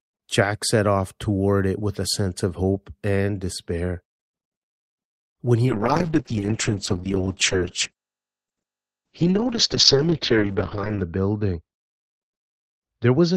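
At 5.66 s a call bitrate drop sets in and lasts to the end of the clip: the encoder's rate falls from 32 kbps to about 7 kbps, sitting at that floor for roughly 5.4 s. With so few bits, the speech turns rough and watery, and it loses its brightness as the coded bandwidth narrows from 20 kHz to 8 kHz. On a spectrogram, energy above 8 kHz vanishes, leaving a flat ceiling and smeared, blotchy detail below it.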